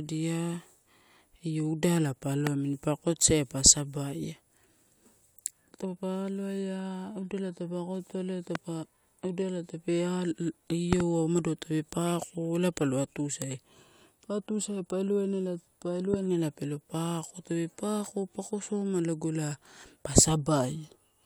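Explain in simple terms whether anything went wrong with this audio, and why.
Sharp loud pops cut through the speech four times: at 2.47 to 2.49 s, just before "amini pa akotosaia pa"; at 8.55 to 8.58 s; as a quick double pop at 10.93 to 11.02 s, right before "umado tape"; and at 16.14 to 16.16 s, before "ela pelo". The speech carries on underneath. Each is likely a sudden jolt of electricity, from a plug, switch or static, that got added to the signal.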